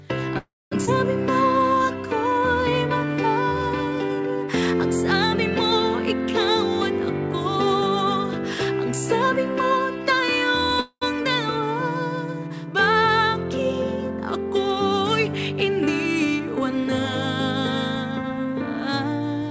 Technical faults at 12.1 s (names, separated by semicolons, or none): none